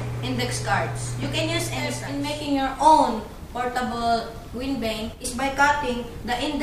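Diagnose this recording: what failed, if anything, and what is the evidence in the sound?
A digital gain stage, likely a level setting or one-bit shift applied without a ramp, stepped the signal down by about 6 dB from one sample to the next. This is a sudden gain jump: from 5.14 s to 5.24 s the sound and its background noise drop together, with no fade in or out, so the noise floor itself moves. Because the change lands on a single sample boundary, the waveform steps abruptly rather than easing between levels.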